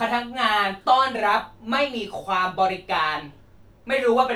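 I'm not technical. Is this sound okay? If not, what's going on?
Yes, nothing technically wrong can be heard anywhere in this speech clip.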